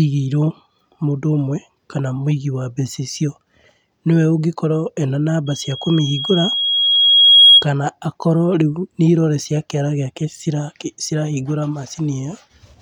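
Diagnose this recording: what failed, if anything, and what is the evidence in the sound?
Loudspeaker feedback squeal from 5.46 to 7.66 s, arising in the analogue acoustic loop. A 3.3 kHz tone swells over roughly two seconds to about 10 dB above the speech. The microphone is hearing its own loudspeaker, and at 3.3 kHz the loop gain exceeds one.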